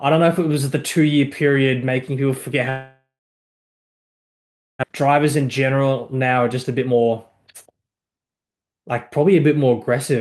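From 2.69 to 4.85 s the sound breaks off. The gap is filled with a fading buzz that settles into roughly 1.7 s of silence, and it resumes with about 1.58 s simply gone. That's likely a long network dropout, and it left roughly half a second of extra delay behind.

Right after, from 4.93 to 7.13 s and again from 7.53 to 8.85 s, there's jitter buffer speed-up. The receiver trims tiny pitch-period chunks to drain that backlog, running at 115% and then 113%. About 0.3 s and 0.2 s are cut, so the speech sounds hurried without any pitch shift.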